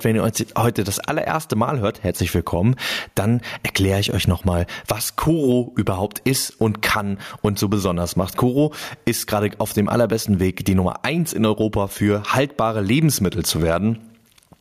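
Speech throughout, with gain pumping across the whole clip, likely from input gain set far too high and a fast limiter clamping down on each loud syllable. The gain swings by around 15 dB, leaving the level squashed and breathing.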